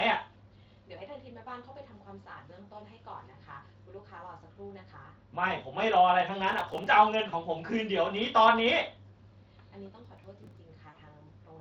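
From 6.50 to 6.87 s a gritty, tearing crackle rides over the speech, then stops. This is processor overload crackle. The audio engine misses a run of deadlines on very small buffers, around a millisecond and a half each, and roughly twenty in this stretch. Each missed buffer is skipped, leaving hard-edged holes that together sound like tearing.

At 7.29 to 7.36 s the speech turns briefly buzzy and thins out, with a weak, smeared tail. That is VoIP packet loss concealed by the speech codec: about 40 ms of audio went missing. The Speex decoder, whose light coding roughness is audible throughout, fills the gap by extending its last pitch and spectral shape while fading the level. The next frames build on that guess, so the voice takes a moment to recover.

The same crackle returns from 10.05 to 10.57 s. It is sparser this time, fitting about ten skipped buffers spread over the half-second.

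At 10.90 to 10.98 s a second concealment covers about 60 ms. The buzzy fill stretches further before the speech firms up again.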